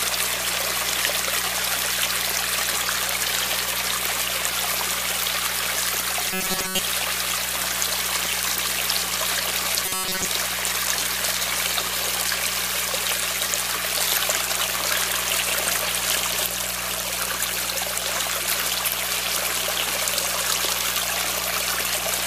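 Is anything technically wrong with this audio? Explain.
Yes, there's robotic sound from repeated short buffers, from 6.31 to 6.79 s and from 9.86 to 10.25 s. It's a rigid, metallic buzz at 188 Hz, likely from a stalled stream where the last 5.3 ms or so keeps looping, replacing most of the real audio.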